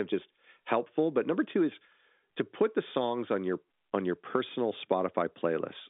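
Nothing's going wrong in this speech clip: it's just an ordinary telephone-band line, with the G.711 coding doing its normal job and nothing getting through above about 3.7 kHz.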